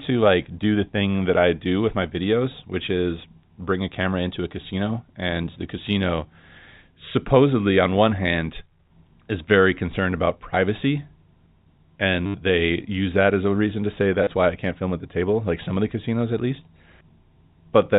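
Packet loss with the last packet repeated occurs at 12.26 to 12.34 s, just before "they use that as", and again at 14.24 to 14.27 s, between "a reason to say" and "why I can't film". In each gap the receiver replays its last packet instead of the missing ones. The first gap lasts 80 ms and gives a buzzy, robotic stutter, with a rate that fits 10 ms packets. The 30 ms gap is a brief stutter. Both sit within the narrow telephone band of the G.711 line.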